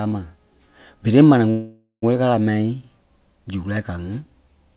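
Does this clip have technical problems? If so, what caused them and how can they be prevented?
Yes: a call audio freeze at 1.50–2.04 s, where the sound stretches into a fading buzz or hiss and then 0.11 s of silence, likely from delayed packets emptying the jitter buffer. Speech resumes where it stopped, with nothing lost but the timing pushed back about half a second. To prevent it, give the call a steadier, less congested network path, or use a larger adaptive jitter buffer that absorbs such delays.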